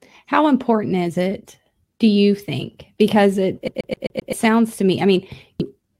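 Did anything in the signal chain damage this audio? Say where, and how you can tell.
Yes. The first fault sits in playback, at the disc transport: a CD stuck on one turn. From 3.68 to 4.33 s the same 130 ms slice of speech repeats five times, each pass cut off by a brief mute where the pickup jumps. A scratch is throwing the laser back one track at the same point on every rotation, so the loop length matches one revolution. That is what produces the rapid, perfectly even stutter.

The second fault is in the codec path: damaged data in a compressed stream, heard as a short blip at 5.60 s. Corrupted bytes in the encoded file or stream left the decoder unable to read the frames at that point. It lost sync and searched for the next valid frame header, and that brief misdecode is the sound that breaks through.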